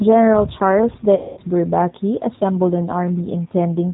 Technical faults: G.729 codec; VoIP packet loss concealed by the speech codec

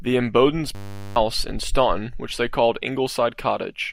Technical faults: system hang loop

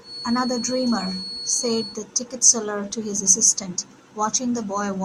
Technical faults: feedback whistle

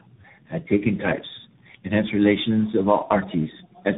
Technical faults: tandem speech coding

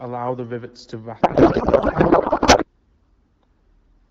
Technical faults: codec payload misread

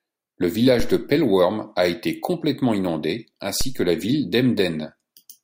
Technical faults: DC step

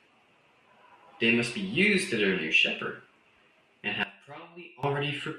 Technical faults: one channel inverted

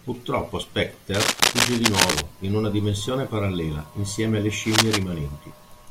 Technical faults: cable scratch noise

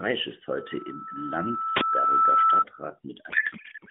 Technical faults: codec payload misread

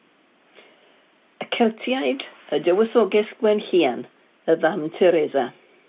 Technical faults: none

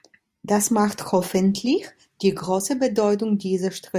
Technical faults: none

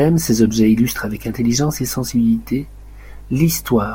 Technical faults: mains hum

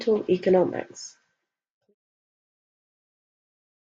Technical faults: none

